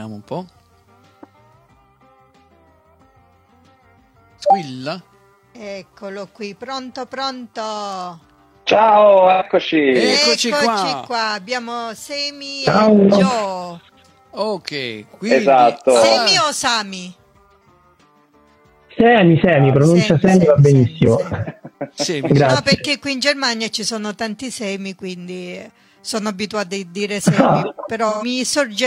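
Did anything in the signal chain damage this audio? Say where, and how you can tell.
Yes. At 9.31 to 9.43 s, 21.22 to 21.27 s and 28.09 to 28.25 s the sound turns briefly smeared, noisy or phasey rather than cleanly cut, the mark of AAC frame loss with concealment at the codec and network stage. The gaps of roughly 85, 43 and 128 ms fit one to three lost frames of about 43 ms each. The decoder filled each hole from the last good spectrum, with scrambled signs or interpolated energy.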